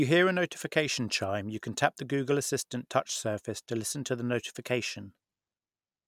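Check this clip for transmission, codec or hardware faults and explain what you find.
Nothing in the speech stood out as a fault on listening.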